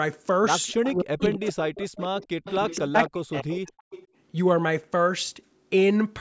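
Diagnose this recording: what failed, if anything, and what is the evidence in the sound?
The call processing stage failed: an echo leak, most likely from a loudspeaker-side echo canceller that did not fully subtract what its microphone picked up. A faint delayed copy of the speech, about 260 ms behind, comes back at 0.67–0.93 s, 1.20–1.25 s, 1.98–2.27 s, 2.44–2.82 s and 3.77–4.07 s. It sits roughly 15 to 20 dB under the direct speech.

The same canceller also shows speech suppressed in double talk. When both ends spoke at once, it likely could not tell the near talker from the returning loudspeaker signal, so it attenuated everything. From 0.72 to 1.98 s and from 2.80 to 3.92 s the speech is turned down for around a second of each stretch, and at its deepest falls by something like 40 dB, which is effectively silence. The band-limiting to nothing above 8 kHz is ordinary call microphone processing, not part of either fault.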